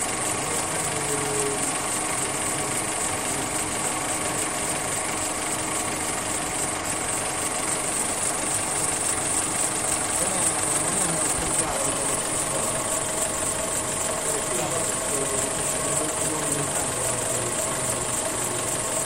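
At 6.77, 11.63 and 14.58 s there's AAC frame loss with concealment: roughly 43 ms gaps, likely single missing frames, patched from the previous spectrum as brief smeared, phasey blips.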